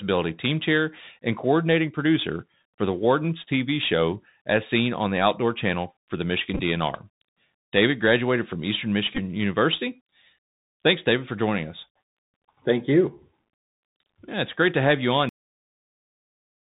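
The whole clip carries the sound of a Bluetooth CVSD headset codec, which fits a 64 kbit/s narrowband link. Nothing above 4 kHz survives. The codec steps one bit at a time and cannot keep up with loud, bright sounds, so they distort. S sounds come out scratchy, and a grainy hiss sits underneath.

At 6.54 to 6.61 s, right after "for the", a Bluetooth headset packet repeat occurs. About 26 ms of audio was lost across 45 ms, and the chip replayed the previous packet in its place. The longest run, around 15 ms, repeats every 3.75 ms and gives a brief buzz near 267 Hz.

A second repeat follows at 9.15 to 9.19 s. About 22.5 ms went missing across 30 ms, with a run of around 10 ms. It makes a shorter burst of the same 267 Hz buzz.

The clip has a cut-off end at 15.29 s, just after "to have you on". The final stretch of audio was never played out. The sound stops mid-flow and drops straight into digital silence, with no natural decay.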